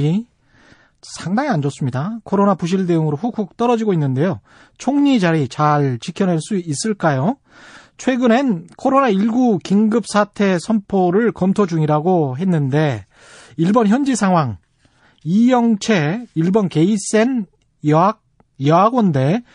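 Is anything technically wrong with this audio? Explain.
Yes. Plainly audible MP3 compression runs throughout the speech. It sounds watery and swirly, with metallic chirps on s sounds. The likely cause is an encoder short of bits. It cuts the treble and zeroes weak frequency lines that flicker between frames. This fits a 40 kbps bitrate.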